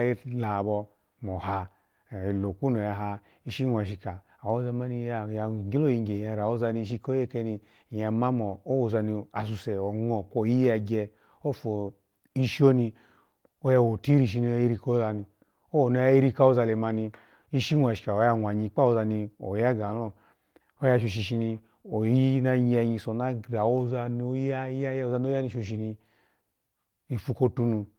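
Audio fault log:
Nothing stood out on listening to this speech.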